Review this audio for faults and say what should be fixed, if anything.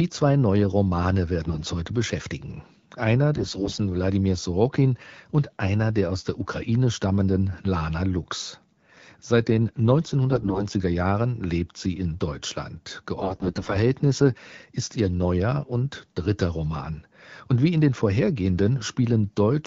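Four short bursts of hoarse, scratchy, gargly roughness, at 1.43 to 1.67 s, 3.36 to 3.80 s, 10.32 to 10.65 s and 13.19 to 13.77 s, keep pitch and level roughly intact. These are AMR bit errors: around one bit in ten (about 15% in the second burst) flipped in the weakly protected part of each frame, so excitation pulses landed wrongly and fine pitch, gain and spectral values drifted. The wideband AMR-WB coding underneath sounds clear, consistent with about 12.65 kbit/s. Stronger channel coding or a more robust link mode on weak radio conditions would prevent it.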